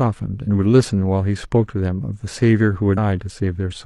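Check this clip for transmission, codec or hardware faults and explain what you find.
There's one fault in this speech clip: damaged data in the compressed stream from 2.93 to 2.98 s. Corrupted bytes throw the decoder off sync, so you get a short blip as it hunts for the next good frame.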